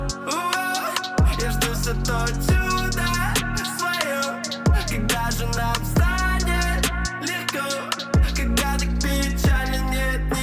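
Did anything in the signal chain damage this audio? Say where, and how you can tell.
No, nothing in the signal chain damaged this audio, and no stage left any audible trace.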